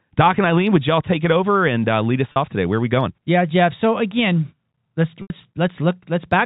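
At 2.32 s there's a brief hiccup running to about 2.36 s: packet loss with pitch repetition. Roughly 40 ms of audio went missing, which fits two 20 ms packets, and the receiver patched the hole by looping the last pitch cycle, so you hear a short, slightly buzzy hold. The second one, at 5.22 to 5.30 s, is about 80 ms long. The repeated cycle runs out of steam and fades toward silence before the speech cross-fades back in, all over the narrow telephone band.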